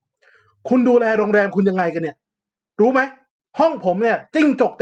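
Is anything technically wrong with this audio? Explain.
Yes. The speech contains two stretches of lost packet rebuilt from error correction. From 1.11 to 1.25 s, about 80 ms is rebuilt, which fits four lost packets, and 3.87 to 3.89 s is a single 20 ms rebuild. Each missing packet was replaced from the low-bitrate copy carried in the following packet, so there's no gap. Those moments simply turn briefly rougher and noisier. Generic loss concealment would instead smear or fade the sound by guessing from what came before.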